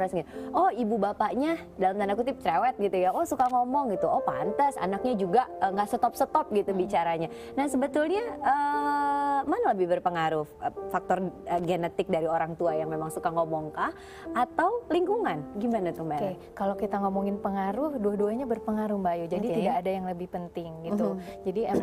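Two short bursts of loose connector crackle break into the audio, from 3.39 to 3.51 s and again from 11.58 to 11.65 s. Each is an irregular scratch, the first lasting about 0.12 s and the second about 0.07 s, caused by a worn or dirty contact repeatedly making and breaking as it shifts, chopping the signal on and off. On a waveform this shows as ragged dropouts and spikes; a spectrogram shows clustered broadband vertical streaks at those times.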